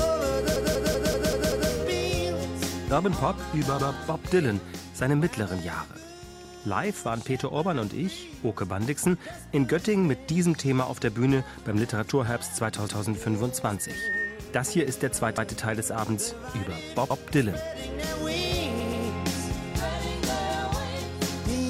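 Repeated frames occur at 0.56 s, 3.79 s, 12.88 s, 15.38 s, 17.10 s and 18.80 s. Each time, a block of compressed audio between 96 and 192 ms long is played again. This gives a stutter. At 0.56 s the 192 ms block replays six times and stretches the audio by 1.15 s. At 18.80 s it replays twice, and at the other four points it replays once.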